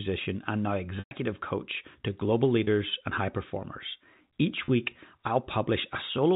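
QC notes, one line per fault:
0.99–1.11 s, packet loss with pitch repetition: about 120 ms of the G.711 telephone stream failed to arrive, which fits a run of several lost packets. The receiver looped the last pitch period to cover the gap and faded it out over roughly 50 ms. The sound briefly holds a buzzy tone, then drops to silence before cross-fading back in.
2.64–2.67 s and 4.65–4.68 s, packet loss with pitch repetition: each gap is a single 30 ms loss, which fits one missing packet. The repeated pitch period bridges it before the fade can finish, so each sounds like a short, slightly held, buzzy note rather than a dropout.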